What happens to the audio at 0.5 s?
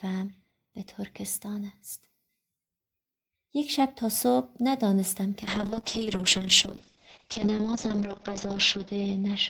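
Nothing goes wrong at 0.5 s; the speech there plays through intact, with no dropout, click, distortion or other audible fault at that moment.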